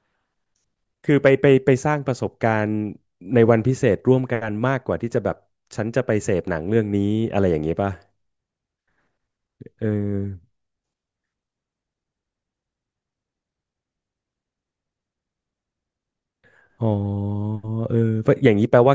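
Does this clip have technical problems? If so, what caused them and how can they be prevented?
No, there are no technical problems in this speech.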